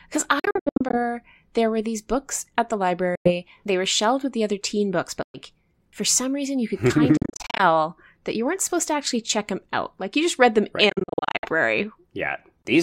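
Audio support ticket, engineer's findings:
Bluetooth dropout, five events. Sound cuts to silence in short holes with abrupt or briefly faded edges and resumes as if it had played on, likely packets missing the headphone link. 0.39–0.97 s, ending before "there were these books": scattered gaps totalling 294 ms, longest 70 ms. 3.15–3.32 s: 98 ms. 5.22–5.38 s, after "the other teen books": 112 ms. 7.17–7.63 s, after "reason you could kind": gaps totalling 252 ms, longest 42 ms. 10.89–11.48 s: gaps totalling 336 ms, longest 56 ms. On a spectrogram these show as full-band blank vertical strips. On a waveform they appear as flat near-silent runs with abrupt or briefly faded edges.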